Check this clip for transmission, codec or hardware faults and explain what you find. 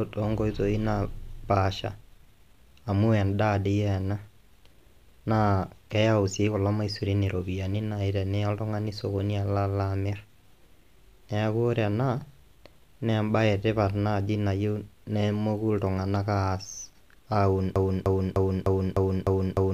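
One fault is present: a broken-record loop from 17.76 s to the end of the clip at 19.73 s. A fragment of speech about 0.30 s long repeats exactly, back to back, seven times, and the speech that should have continued is lost. This likely comes from the player, encoder or stream stalling and resending the last fragment it held. Unlike an echo, which fades, these repeats are identical in level and timing, giving a rigid, mechanical stutter.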